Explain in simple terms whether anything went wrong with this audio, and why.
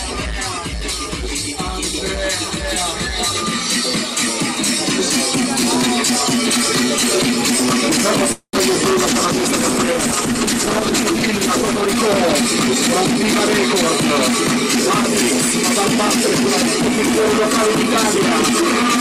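Three things went wrong. At 8.32 s a call audio freeze: some data likely got held up on the way, so the receiver ran out of sound and stretched the last bit into a fading buzz that ends in a brief silence. The sound then resumes where it stopped at 8.56 s, nothing lost, just a pause of about a fifth of a second.

From 9.08 s to 13.03 s there is a call bitrate drop. The connection seemed to shrink, so the system squeezed the sound into far less data. It turns rougher and duller for those four seconds, worst for about two seconds, then clears up.

From 18.19 s to the end there is a jitter buffer speed-up. The receiver had built up too much waiting sound and trimmed tiny slices to catch up, about a twentieth of a second in total. The audio plays about 6% faster without changing pitch.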